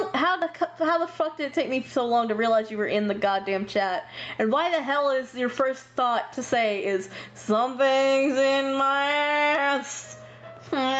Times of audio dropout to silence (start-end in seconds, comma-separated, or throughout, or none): none